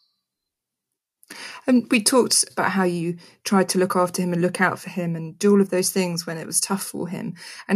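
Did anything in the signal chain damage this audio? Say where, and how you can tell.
No, nothing audible in this speech points to damage at any stage of the chain, from capture through to playback.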